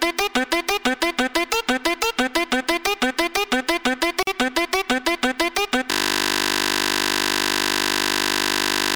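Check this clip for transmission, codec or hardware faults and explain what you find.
Two faults turn up here. At 4.23 to 4.27 s there's a gap at a join of encoded pieces, about 45 ms of silence with smeared edges where separately encoded chunks were butted together with their start delay and end padding still in, before the sound picks up where it left off. Then from 5.91 s to the end a system hang loop takes over: the machine froze while the hardware kept replaying one 20 ms buffer, giving a steady 50 Hz buzz.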